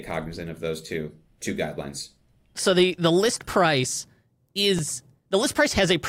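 At 4.79 s the speech jumps. A few milliseconds are missing, likely a dropped buffer (overrun), with the two sides joined directly.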